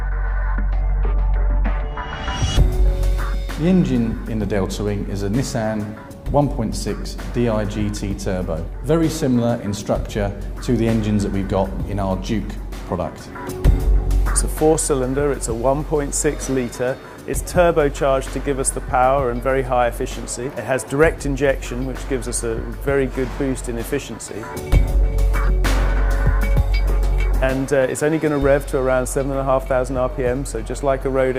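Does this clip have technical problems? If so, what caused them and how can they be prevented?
No, the signal shows no technical faults, so there is nothing here to trace to a cause or to prevent.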